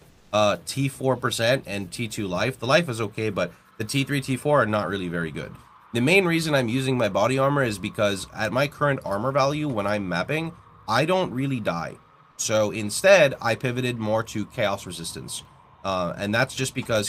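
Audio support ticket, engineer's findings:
Comfort noise in place of the background, 0.09–0.31 s (220 ms). Background texture swapped for flat, featureless hiss, about 2 dB quieter. Likely sender-side discontinuous transmission, which fits Opus DTX, with the receiver synthesising the fill. Unlike a noise gate or suppressor, the gap isn't silent and isn't pumping. Steady substitute noise, background sitting about 36 dB below loud passages.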